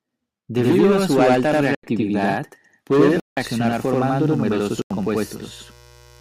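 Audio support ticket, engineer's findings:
Channel delay (doubling) throughout. Speech heard twice, about 85 ms apart, consistent with a 4096-sample buffer. Late channel summed to mono. Waveform shows a repeated onset; spectrogram shows comb notches.

Corrupt frame muted at 1.75–1.84 s (after "a su alta"), 3.20–3.37 s and 4.77–4.91 s. Decoder dropped damaged frames and the player filled silence. Appears as abrupt flat gaps in the waveform and blank vertical stripes in the spectrogram.

Mains buzz from 2.93 s to the end. Steady raspy 60 Hz buzz, roughly 30 dB below the speech. Switching spikes from a dimmer or rectifier, or a missing shield. Spectrogram shows evenly spaced horizontal harmonic lines.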